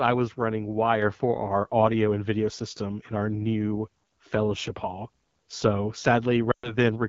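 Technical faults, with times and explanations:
Throughout: AMR wideband (HD Voice) codec. The speech is plainly rough and raspy, which fits the low 8.85 kbit/s mode. Below 6.4 kHz a pulse-excited vocal tract model rebuilds the voice coarsely, and shaped noise fills 6.4 to 7 kHz. On a spectrogram, energy stops near 7 kHz, and the top band looks smeared and noisy rather than harmonic.
6.52 to 6.77 s: lost AMR speech frames. For about 0.12 s the decoder reuses the last good pitch and vocal tract settings with falling gain, which fits six lost 20 ms frames. In wideband this collapses to near silence within two frames, so the waveform shows a brief tail and then a flat gap. The spectrogram shows a nearly empty column, and the voice returns weak or rough for a moment.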